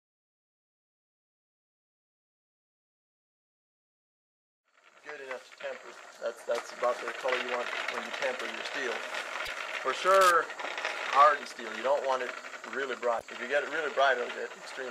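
A broken MP3 bit reservoir is the likely cause of two brief glitches, at 9.45 to 9.49 s and at 13.18 to 13.22 s. Each time the sound jumps forward and a garbled stretch of about 44 ms follows, less than two frames of 26.1 ms. After frames are lost, the next frame reaches back into the reservoir for data it borrowed earlier and finds bytes from unrelated frames, so it decodes as damaged sound until the stream recovers.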